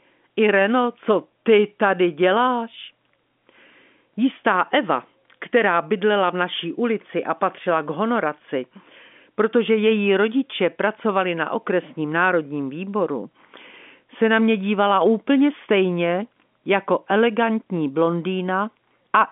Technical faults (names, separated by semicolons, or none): none